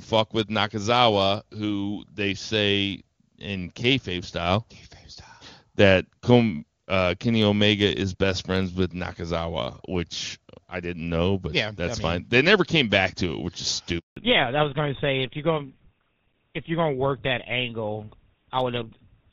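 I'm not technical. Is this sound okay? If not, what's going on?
No. At 13.99 s, just after "to it which is", the voice cuts out for 0.18 s. This is a handover gap: the phone switched networks and briefly received no speech.

From 14.17 s to the end, the voice becomes duller and rougher, losing its crisp edge. This is a fallback to narrowband: the call dropped from HD Voice to an older codec that discards everything above 4 kHz.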